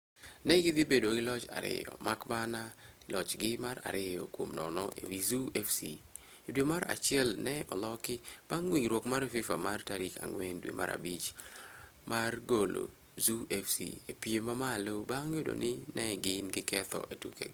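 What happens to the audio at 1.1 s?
At 1.1 s, as throughout the clip, the speech carries the sound of low-bitrate audio saved at a high bitrate. It was likely first squeezed by a low-rate speech codec, then re-encoded as a large MP3 that cannot restore the detail already discarded, so the artefacts of that first pass remain.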